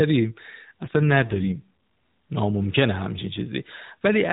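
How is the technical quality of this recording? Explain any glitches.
Narrowband mobile-call speech with one glitch; nothing passes above 4 kHz. From 0.82 to 1.67 s the speech turns rougher and buzzier with no gap, which fits an AMR rate drop from 12.2 to about 5.9 kbps as the network traded bits for protection.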